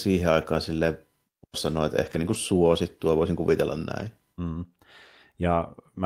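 Lost packets rebuilt from error correction at 0.41 s, 2.05–2.35 s (just before "suosittua voisin kuvitella") and 3.99 s: no gaps, just brief rough, noisy patches where low-bitrate backup copies filled in.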